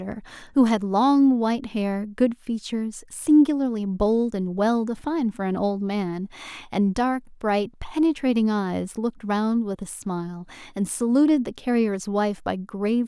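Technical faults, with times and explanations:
No technical faults can be heard in this clip.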